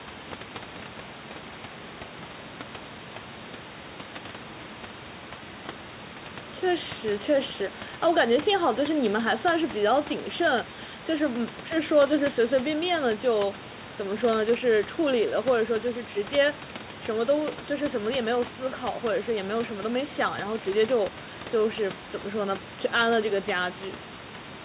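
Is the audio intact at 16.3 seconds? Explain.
Yes, the speech at 16.3 s is intact, with only the room noise about 13 dB below the speech and the G.711 A-law call path's bandwidth, which stops at 4 kHz, heard there.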